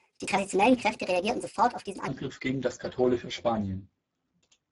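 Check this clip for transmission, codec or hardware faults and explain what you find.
Two faults are present: a sped-up opening and Speex coding damage across the whole clip.

From 0.0 to 2.08 s there is a section at the wrong speed. The speech sounds hurried and noticeably high, lifted by roughly seven semitones, then drops to its normal pace and pitch. Speed and pitch move together at a factor of 1.45, so the likely cause is that this part was played back or edited against the wrong clock, stretching nothing but compressing the time.

The Speex codec damage runs throughout and is plainly audible: the speech is hoarse and noisy. This CELP codec is starved of bits for the excitation signal at this setting, which fits a bitrate near 10 kbps, so the fine structure of the voice is replaced by coarse approximations, and the top band is only a shaped noise fill rather than real detail.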